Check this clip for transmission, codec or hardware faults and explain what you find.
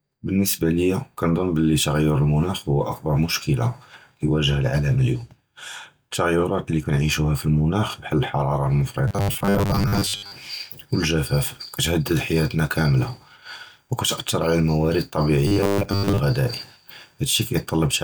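Two stretches of robotic sound from repeated short buffers show up, at 9.08 to 10.33 s and 15.47 to 16.21 s. The speech turns into a rigid 100 Hz buzz, likely from the last 10 ms being looped while most of the real audio is dropped.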